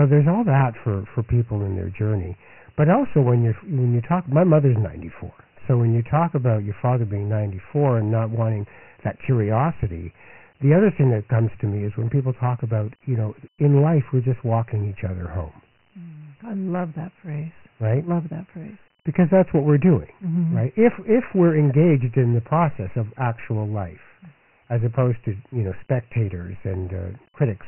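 From start to finish the speech carries Dialogic VOX ADPCM damage, heavy here. Nothing reaches above 3 kHz, which fits the 6,000-samples-a-second, 4-bit flavour at 24 kbps. The coarse step-size tracking leaves a gritty hiss riding along behind every syllable.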